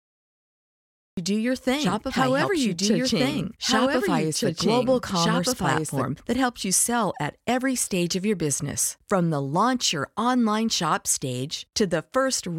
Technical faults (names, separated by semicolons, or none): cut-off start; doubled audio track